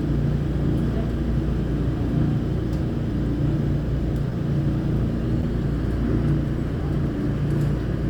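Brief smears at 4.30 s and from 5.41 to 5.43 s are short concealed packet loss. About 10 ms of audio arrived too late, and the receiver bridged each gap by extending the preceding sound.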